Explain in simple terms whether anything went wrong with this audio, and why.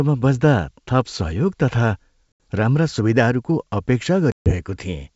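Packet loss on an ADPCM call occurs at 2.32 s and again from 4.32 to 4.54 s. Each time, a run of network packets never arrived. About 80 ms of sound is missing in the first gap and about 140 ms in the second, each replaced by a hard-edged silence. Because the G.722 wideband coding predicts each moment from the one before, the receiver loses track, and the sound returns slightly distorted before settling.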